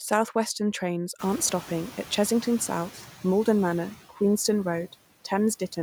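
A block size mismatch (truncated) runs through the whole speech clip: one stage hands over longer blocks than the next one reads, and the tail of each block is discarded. The result is a steady 43.1 Hz buzz, which fits 1024-sample blocks. Speed and pitch stay essentially normal.

Also throughout, noise suppressor artifacts appear as the suppressor turns down frequency bands it judges to be steady noise, by about 9 dB. The background sinks between words and swells back under them.

From 1.18 s to 2.97 s the noise suppressor is catching up. The room noise jumps by about 22 dB at around 1 s, and the suppressor's noise estimate needs 1.79 s to follow. The louder background first comes through with only about 6 dB of reduction, then gradually settles lower.

From 4.09 s to 4.21 s, speech is cut by the noise suppressor, which mistakes part of the speech for background. For about a tenth of a second the sound drops by as much as about 10 dB and comes across as swallowed and faint.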